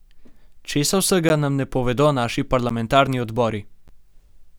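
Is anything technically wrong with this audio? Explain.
Yes. The speech drops out with a sharp tick at 1.29, 2.69 and 3.88 s. Each is a block of digital silence about 12 ms long, cut in and out with no fade. The identical length fits a 512-sample buffer, pointing to output blocks not filled in time.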